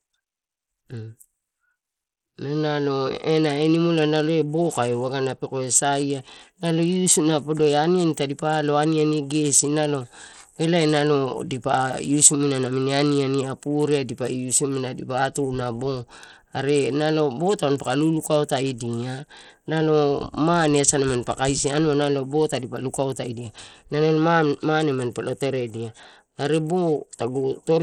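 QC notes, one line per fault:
Throughout, Bluetooth SBC compression: the speech sounds plainly gritty and dulled, with the treble thinning out and flickering in and out, and a rough, grainy noise with aliasing riding on it. This is likely SBC coding with a small bit pool, which fits a low rate around 80 kbps. Its simple bit allocation, with no model of hearing, starves the weaker top sub-bands and coarsely quantises the rest, so high detail drops out and quantisation noise becomes audible.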